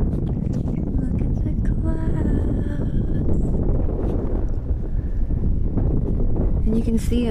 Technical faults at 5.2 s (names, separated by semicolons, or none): none